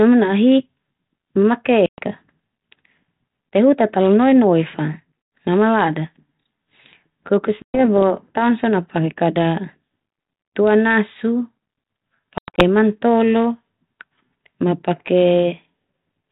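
Hard-edged holes of silence cut the speech at 1.86–1.99 s, 5.22–5.32 s (just before "ma malada"), 7.62–7.81 s and 12.38–12.63 s, each followed by slightly distorted speech before it settles. This is packet loss on an ADPCM call. Gaps of 120, 100 and 120 ms, then 160 ms scattered in runs up to 100 ms, roughly 7, 5, 7 and 7 packets, left the telephone-band G.726 decoder's predictor and step size out of step with the sender's.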